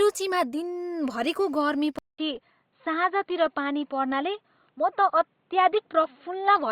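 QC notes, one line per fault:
1.99–6.71 s: input switched to a poorer device. After a 200 ms silence at 1.99 s, the speech runs to the end with nothing above 4.3 kHz, so it turns dull and boxy while its loudness stays about the same. A faint new background noise also appears, roughly 45 dB below the speech. A sudden narrowing with a gap and a fresh noise floor likely means the recording moved to another microphone or a headset's call profile with a narrower band.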